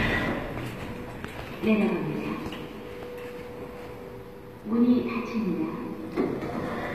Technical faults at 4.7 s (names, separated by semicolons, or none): HE-AAC compression